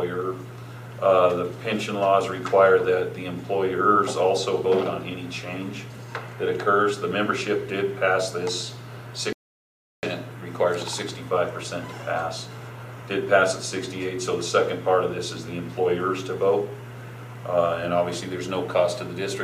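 At 9.33 s the player likely ran short of data or had its thread blocked, producing a playback stall: the output drops abruptly into silence mid-flow and stays dead for about 0.7 s, until sound returns at 10.03 s once the player recovers.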